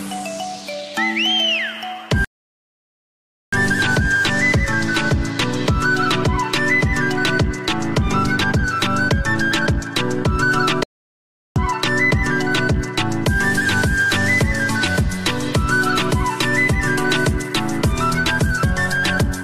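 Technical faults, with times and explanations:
2.25 to 3.53 s and 10.83 to 11.56 s, playback stall: the sound just drops out mid-flow, first for about 1.28 s, then for about 0.73 s, and picks up again afterwards. These are dead gaps, not fades or glitches, which points to the player likely running dry of data or having its output thread held up, so nothing reached the output until it caught up.
18.63 to 18.66 s, damaged data in a compressed stream: a short blip of roughly 30 ms. Some bytes in the compressed stream were corrupted, so the decoder misread those frames, lost its place and had to hunt for the next valid frame header. That brief garbage output plus the resync is what gives the little hiccup right near the end.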